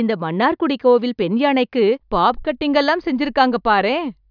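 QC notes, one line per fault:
No faults heard in this speech recording.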